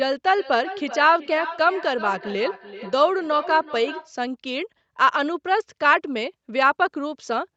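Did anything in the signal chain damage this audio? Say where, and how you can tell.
Yes. From 0.37 to 4.14 s there is feedback echo between two devices. The speech returns as discrete, increasingly thin and ringing repeats roughly every 0.4 s, peaking at about 15 dB below the speech. Room reverberation would be a smooth decay rather than spaced copies like these. They come from an acoustic loop in which a second device's playback reaches the microphone, and neither echo canceller can remove it.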